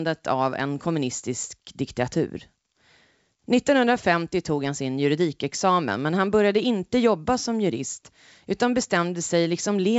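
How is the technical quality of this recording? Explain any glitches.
The technical quality is good, and there are no glitches to explain in this wideband telephone speech.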